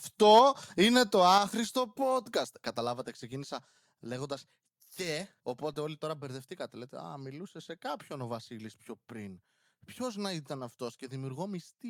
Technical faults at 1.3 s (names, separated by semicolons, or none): microphone overload; microphone volume stepped down